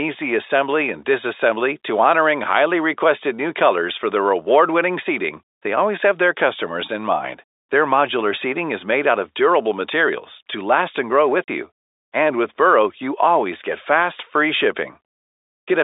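Speech carried over a G.711 telephone coding path, band-limited to roughly 300 Hz to 3.7 kHz, has one fault: packet loss filled with silence. Right after "to last and grow", from 11.44 to 11.48 s, the sound stops dead for 40 ms, which fits two lost 20 ms packets. Concealment would smear or repeat the preceding sound across the gap, and a level dropout would fade. This hole is silence with abrupt boundaries, so the receiver simply played nothing where the missing packets should have been.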